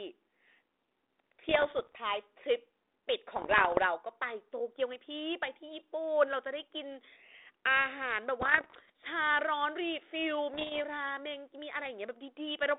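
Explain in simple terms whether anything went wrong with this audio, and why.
The speech has bit errors on an ADPCM link. You hear pops and rough bursts at 1.49 to 1.98, 3.36 to 3.83, 8.41 to 8.90 and 10.54 to 10.81 seconds. Flipped bits confuse the decoder, so each glitch lingers briefly.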